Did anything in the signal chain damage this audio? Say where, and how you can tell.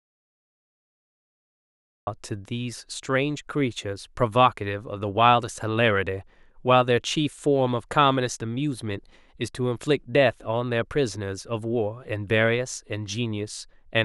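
Yes: an audio dropout to silence, likely a lost input link, leaves silence from the start until 2.07 s, with no room tone, unlike a quiet lead-in.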